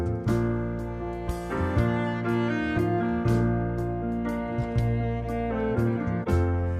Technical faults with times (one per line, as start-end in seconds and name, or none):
none